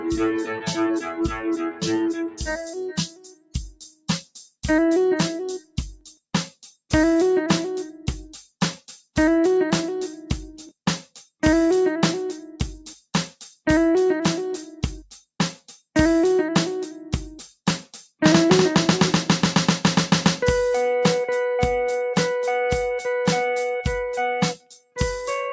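The audio has passed through a call's processing chain, with nothing above 8 kHz. A noise suppressor applied to music or sounds stays active throughout. It is built for speech, so it treats steady tones, ambience and decays as noise. Its gain keeps swinging, by about 15 dB, which makes the sound pump and thin out. Onsets survive better than the material that follows them. In four places, sound is cut by the noise suppressor outright. From 0.0 to 4.28 s the opening sinks by up to about 21 dB. Two short dips follow, from 5.59 to 5.77 s (about 21 dB) and 5.94 to 6.18 s (about 17 dB). A final cut runs from 24.54 to 24.99 s, again about 21 dB. The suppressor judged these stretches to be noise and pulled them down.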